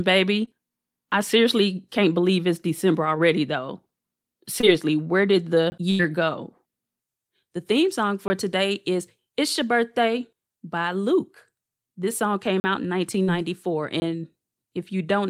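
A speech recording with three kinds of transmission and playback fault. Short concealed packet loss occurs at 0.45 s, 4.61 s and 13.23 s, where 20, 20 and 40 ms of audio never arrived. The receiver bridged each hole with 14, 20 and 37 ms of audio extrapolated from the preceding sound, then blended back, giving brief smears or wobbles. A block of digital silence appears at 5.70 s, 8.28 s and 14.00 s (20 ms each) and at 12.60 s (40 ms). The audio drops out and returns with no fade, leaving short holes. The output buffer was either not filled in time or given invalid values. A burst of packet loss at 5.91–6.01 s removes about 80 ms of speech. The receiver filled 82 ms by extending the last sound while fading it, heard as a held buzz or fading hiss, and the speech then resumes further on.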